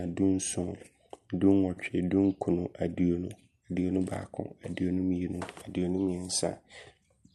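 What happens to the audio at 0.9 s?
Nothing goes wrong at 0.9 s: the speech there passes intact through the call path, carrying only the ordinary character of the Opus codec, which fits a bitrate of around 64 kbps and a band that tops out near 12 kHz.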